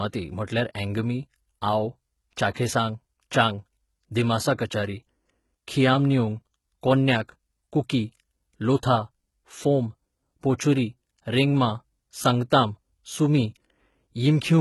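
From start to finish, the speech carries heavy HE-AAC compression damage. The codec likely kept only the lower spectrum and rebuilt the treble from copied bands. Sibilants sound gritty and lispy, fitting a rate near 16 kbps. Nothing sounds above 19.5 kHz.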